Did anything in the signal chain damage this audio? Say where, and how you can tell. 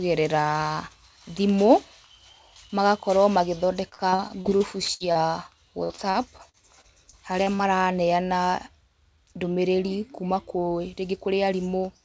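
Yes. Repeated packet loss (robotic sound) occurs at the network and jitter-buffer stage from 3.89 to 5.18 s (10 gaps, longest 65 ms, about 27% concealed) and from 5.84 to 7.62 s (9 gaps, longest 55 ms). The concealer stretches the last sound into each hole, so the speech turns choppy, with pieces missing, in bursts. Steady codec noise, in contrast, stays constant, and here the band stops at 8 kHz throughout, consistent with G.722.

A jitter buffer speed-up runs from 9.85 to 10.58 s. The receiver trimmed roughly 40 ms of pitch periods to reduce excess delay, so the speech plays at 104% speed. The pitch stays unchanged, which separates this from a sample-rate mismatch, where speed and pitch rise together.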